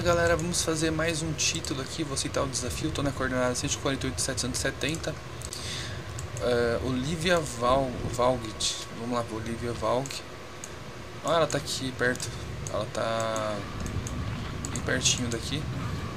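The wireless link likely failed to deliver audio to the headphones in time, a Bluetooth dropout, so the output cuts to silence from about 5.49 to 5.52 s. The gap, roughly 14 ms of missing audio, fits one lost frame, with the sound resuming afterwards as though it had continued playing.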